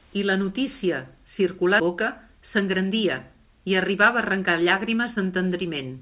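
At 1.80 to 1.82 s the speech lurches forward with no gap, and roughly 0.7 s of it never plays. This is a skip ahead: a stretch of audio was dropped, either on the way or by the jitter buffer, while later audio was already queued, and the two sides were spliced almost directly together.

From 1.94 s to the end, the speech runs about 6% fast at unchanged pitch and sounds slightly hurried. This is jitter buffer speed-up. With too much audio held, the receiver trimmed short pitch-period slices repeatedly, removing around a third of a second in total. Throughout, the G.711 A-law call codec keeps everything below 4 kHz.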